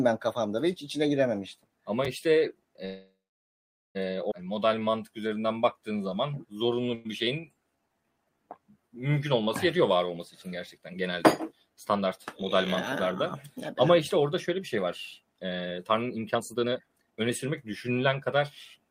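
Call audio freeze, 2.85 to 3.97 s: the sound stalls for about 1.1 s, likely because packets were held up in transit and the jitter buffer ran dry. The receiver stretched the last sound into a fading tail, and roughly 0.82 s of that is plain silence. When the audio resumes, it picks up exactly where it stopped. Nothing is lost, but the playback now runs about 1.1 s later than before.

Skip ahead, 4.31 to 4.33 s: playback jumps forward with almost no gap, only a 3 ms join. Around 0.7 s of audio is gone. A stretch was discarded while later audio was already queued, so the two sides of the cut meet almost directly. This also wipes out much of the delay the freeze had built up.

Jitter buffer slow-down, 4.46 to 10.08 s: the receiver kept repeating single pitch periods and slivers of pauses to rebuild its reserve. The audio runs at about 89% speed with the pitch unchanged, so sounds are drawn out and may warble slightly. 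Over the stretch it adds about 615 ms. Inside it, a second call audio freeze at 6.94 to 7.07 s holds the sound for about 104 ms as a short tail with no silence, likely from another brief packet delay, and then carries on without loss.

Jitter buffer speed-up, three runs: 10.14 to 12.43 s at about 105% speed, trimming roughly 150 ms; 13.05 to 14.57 s at about 106%, trimming roughly 100 ms; and 15.20 to 18.36 s at about 125%, trimming roughly 0.7 s. The buffer was holding more audio than its target, so the receiver cut out short pieces of one or a few pitch periods, again and again. The pitch stays the same, but the pace quickens, and in the last run it sounds clearly hurried.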